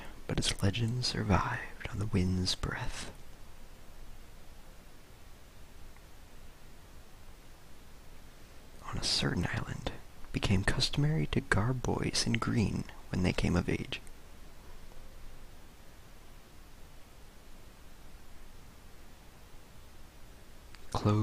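At 9.43 s, fresh audio failed to reach the output in time, so the device replayed the block it had just sent. This is a repeated buffer. The block lasts only about 1.45 ms, which fits a 64-sample buffer, and it plays one extra time. The sound is pushed back by about a millisecond and a half. With a piece this short, the repeat comes across as a click or brief buzz where the waveform joins itself.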